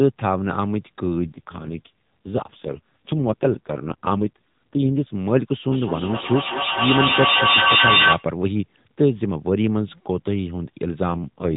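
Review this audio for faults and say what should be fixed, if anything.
The speech hits an AMR rate drop twice, from 1.20 to 5.12 s and again from 11.08 s to the end. It turns buzzier and more synthetic with no gap or band change, which fits the network pushing AMR-NB from 12.2 kbps to 4.75 kbps on a weak link. A stronger radio link or a tuned rate-adaptation threshold would keep it in the higher mode.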